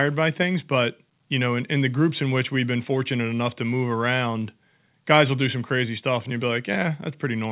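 No technical faults occur anywhere in the speech, which arrives over a G.711 mu-law call path with nothing above 4 kHz.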